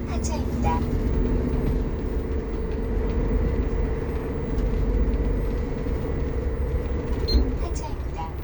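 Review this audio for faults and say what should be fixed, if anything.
Nothing here needs fixing, as no technical fault can be heard anywhere in the recording. The sounds come through intact, with nothing to prevent.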